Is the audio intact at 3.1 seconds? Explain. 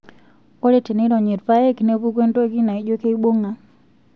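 Yes, the speech at 3.1 seconds is intact, with no audible fault at that moment.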